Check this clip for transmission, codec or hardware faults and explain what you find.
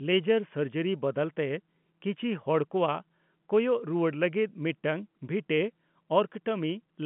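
I find no transmission, codec or hardware faults in this speech clip, which comes through G.711 telephone coding with its usual band limit below about 3.8 kHz.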